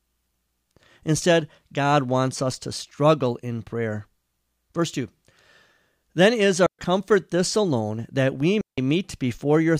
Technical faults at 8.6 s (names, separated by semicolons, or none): digital wireless dropout